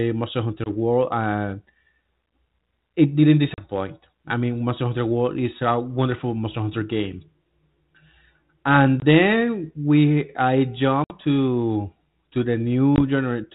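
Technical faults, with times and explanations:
0.64 s, 3.54 s (after "it didn't"), 9.00 s (before "then we I"), 11.04 s and 12.96 s, packet loss on an ADPCM call: hard-edged silent holes of about 20 to 60 ms, roughly one to three packets each. Because ADPCM sends only differences from an adaptive prediction, the decoder's predictor and step size lose track of the sender's during each gap. The sound comes back slightly distorted, settling within tens of milliseconds. That recovery is what separates this from a plain dropout or gating, which resumes cleanly. It is also unlike concealment, which fills the gap instead of leaving silence.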